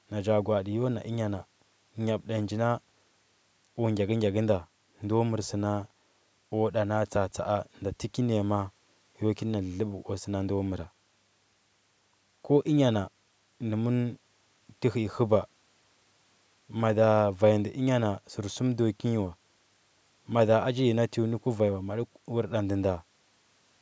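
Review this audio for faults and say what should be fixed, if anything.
Nothing in this audio needs to be fixed, since the review turns up no faults.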